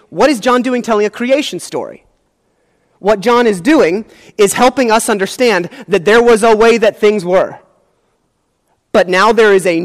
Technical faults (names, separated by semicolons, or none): hard clipping